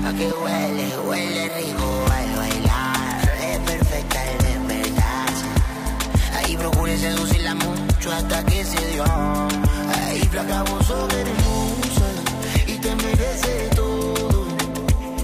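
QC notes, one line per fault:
No fault found, so there is nothing for the QC notes.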